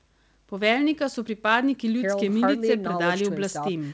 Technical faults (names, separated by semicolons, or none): none